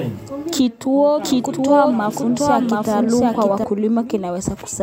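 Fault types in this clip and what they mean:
Doubled audio track: The same speech plays twice, the copy about 0.7 s behind at similar level. It cuts in abruptly at 1.24 s and out at 3.64 s.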